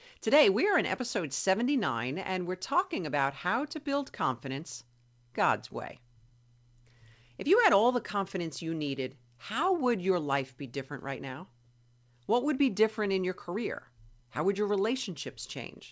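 From the very start and through the whole recording there is clock drift between sender and receiver. The sender's audio clock runs fast, by something like 4 percent, so it delivers samples quicker than the receiving end plays them out. The jitter buffer keeps filling rather than holding steady, and the receiver has to shed material to keep its delay under control. What you hear is a faint, recurring unevenness in the timing of the speech, not one clean glitch.

Those adjustments show up as repeated timing corrections from 0.15 s to the end at 15.91 s. Because the buffer is overfilling, every correction goes the same way: a short piece is cut out, which pushes the effective playback rate to 104 percent. The cuts are small and irregularly spaced, so the speech comes across as slightly rushed, with occasional tiny hiccups and an unsteady rhythm. The cuts ride on top of the call path's limited band, which stops at 8 kHz, consistent with a G.722 wideband codec.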